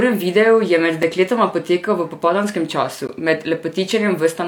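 A gap between stream segments, where the segment timestamps fail to meet, makes the player pad the seam with silence. The speech breaks hard for about 6 ms at 1.03 s, after "videu je med", and for about 15 ms at 3.07 s, after "dekletoma potekal v popoldanskem". The spacing fits 2-second segments.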